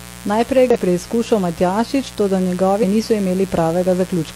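Mains buzz runs from start to finish beneath the speech, a steady, raspy drone sitting roughly 20 dB below the voice. It points to a 60 Hz supply: a dimmer, rectifier or unshielded lead is injecting sharp switching spikes twice per mains cycle, and those spikes carry a ladder of 60 Hz harmonics extending up into the kilohertz range, which gives the buzz its gritty edge rather than a pure hum.

Damaged data in a compressed stream shows up twice, at 0.70 to 0.76 s and again at 2.80 to 2.84 s, each a brief chirp or squawk lasting around 50 ms. At those points the encoded data is corrupt, so the decoder cannot read the affected frames correctly, drops out of sync and has to hunt for the next valid frame header before normal playback resumes.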